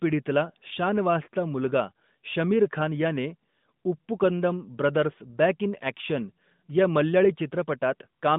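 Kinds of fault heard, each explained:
No faults can be heard anywhere in this recording.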